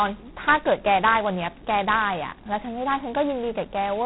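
Speech, with G.726 ADPCM damage throughout. Nothing passes above 3.9 kHz, so it sounds narrow and telephone-like. A harsh, rasping hiss rides on the speech and rises and falls with its level. Such heavy coding noise fits the lowest rate, 16 kbit/s.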